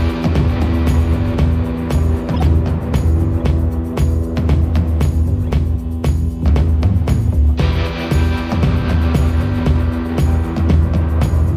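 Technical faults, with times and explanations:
2.33 to 2.42 s, corrupt frame decoded: a short burst of chirpy, squeaky noise lasting under a tenth of a second, reaching roughly -10 dBFS. Damaged bits in several consecutive compressed frames were decoded anyway, so misread gains and spectral codes put energy at the wrong frequencies for the span of those frames. Unlike a dropout or concealed packet loss, loud, wrongly placed, tonal junk replaces the sound.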